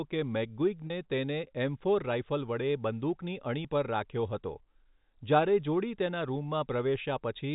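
At 0.87 s a packet loss with pitch repetition occurs, lasting about 30 ms until 0.90 s. The receiver bridged the gap, which fits a single lost packet, by repeating the last pitch period, so the speech briefly holds on a slightly buzzy, sustained tone before resuming.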